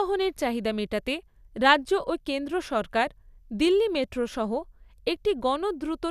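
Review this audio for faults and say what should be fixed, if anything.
No faults; nothing to fix.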